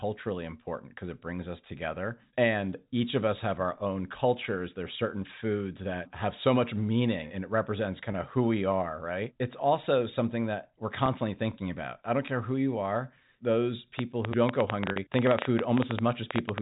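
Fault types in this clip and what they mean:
Packet loss with pitch repetition: Lost stretches of audio are filled by repeating the last pitch period, heard as a brief held, buzzy tone. Gaps of 20 ms at 8.12 and 11.06 s each fit one missing packet, and a 40 ms gap at 14.92 s sounds slightly longer and more sustained.
Train of clicks: From 13.99 to 16.59 s, around thirty similar sharp ticks arrive at about 10 per second with uneven spacing, standing well above the band-limited telephone audio and overlapping the final repetition gap. This is likely interference from nearby equipment or a faulty connection or power supply.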